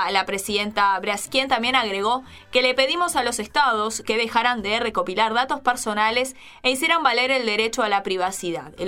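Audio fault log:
1.25–1.27 s, skip ahead: around 0.4 s of sound is missing. Later audio was already queued, so that stretch was dropped, either in transit or by an overflowing jitter buffer, and playback jumps forward with the two sides joined directly, no fill.
1.47–2.63 s and 3.22–5.45 s, jitter buffer speed-up: the buffer had built up more audio than its target, so the receiver trimmed it by repeatedly cutting short pitch-period-length pieces, about a tenth of a second in total each time. The sound runs at 107% and then 104% speed with unchanged pitch.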